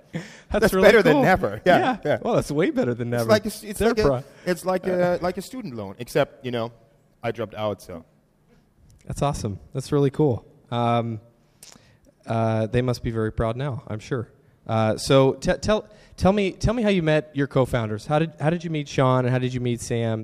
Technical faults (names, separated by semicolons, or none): none